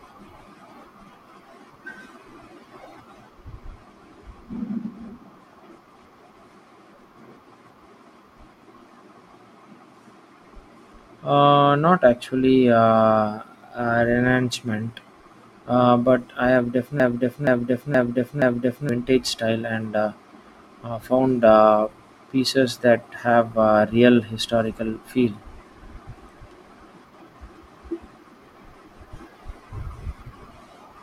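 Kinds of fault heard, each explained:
Broken-record loop, 17.00 to 18.89 s: a fragment of speech about 473 ms long plays exactly the same way four times back to back, then the sound jumps ahead to "vintage style" with no sign of whatever should have filled that gap. This likely comes from a stalled player, encoder or stream that kept resending the last piece it held instead of new audio, so that stretch of the recording is lost.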